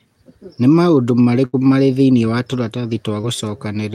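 At 1.45 to 1.55 s a burst of packet loss opens a hole of about 80 ms in the speech. The receiver bridges most of it, roughly 77 ms, by continuing the last sound and fading it, so a held buzz or hiss decays before the talk jumps forward with that stretch gone. On a spectrogram the last sound's energy holds steady and dims; the waveform shows that sound continuing and shrinking in amplitude, then an abrupt change.

At 3.21 to 3.25 s a short concealed packet loss removes about 20 ms. The decoder patches the gap by extending the preceding sound, pitched or noisy, and blends back into real audio, leaving a brief smear or wobble where a quick consonant may go missing. A spectrogram shows a thin column of smoothed, slightly blurred energy; in the waveform the patched stretch looks smoother than its surroundings before normal detail returns.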